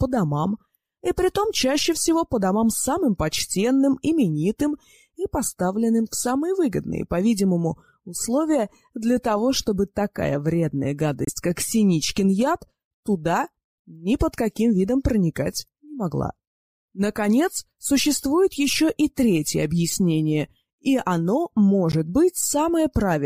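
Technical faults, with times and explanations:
11.25–11.30 s and 21.92–21.95 s, corrupt frame decoded: brief, fairly loud blips or chirps where damaged compressed data got played anyway. Their lengths suggest about two frames, then one.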